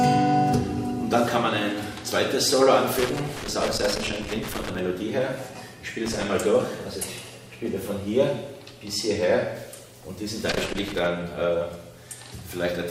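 Loose connector crackle appears from 2.99 to 4.79 s, 6.06 to 6.25 s and 10.51 to 11.06 s: irregular bursts of scratching as a worn or dirty contact makes and breaks, chopping the audio signal and adding pops wherever DC rides on the line.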